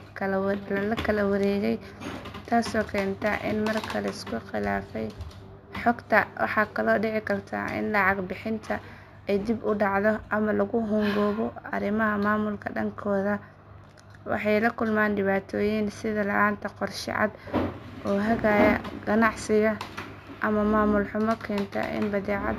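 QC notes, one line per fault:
Throughout, imaging from linear upsampling. The speech was raised to a higher rate by joining samples with straight lines. That acts as a weak filter. The top of the original band sounds dulled. A faint mirror copy of the spectrum sits between 8 kHz and 16 kHz, roughly 35 dB below the signal. This fits audio first sampled at 16 kHz and converted to 48 kHz. The mirrored energy adds a light metallic shimmer to sibilants.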